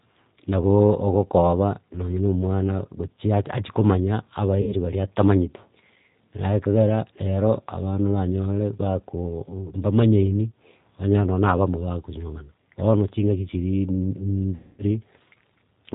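Across the whole speech clip the sound is rough, slightly synthetic and dull, with nothing above 4 kHz and plainly audible damage. This is the G.729 codec at 8 kbit/s, which rebuilds each frame from a vocal tract filter, a pitch estimate and a few sparse pulses.

From 4.61 to 4.75 s the sound smears into a fading buzzy tone or coloured noise and stays weak briefly afterwards. The same happens, longer and more deeply faded, from 14.55 to 14.84 s. This is VoIP packet loss concealed by the speech codec. About 60 ms and then 240 ms of audio went missing, which fits two and then eight lost packets. The decoder extended its last pitch and filter at falling gain, and its recovery lagged after packets resumed.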